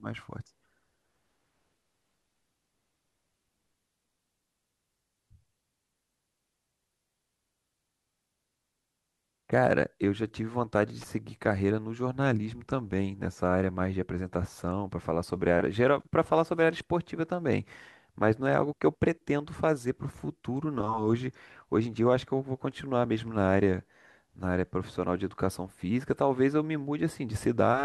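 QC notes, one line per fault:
11.01–11.04 s, loose connector crackle: a worn contact briefly making and breaking chops the speech into a ragged scratchy burst, irregular rather than a single clean digital click.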